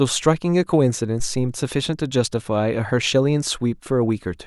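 At 1.20 s a phantom power thump interrupts the speech: a supply switched on or off on the live input sends a voltage step through the coupling capacitors. It sounds like a deep thud, peaking around -17 dBFS and decaying in about 108 ms, with a low tail lingering until 1.68 s. The waveform shows a sudden one-sided offset easing back to zero; the spectrogram shows a dark low-frequency smear.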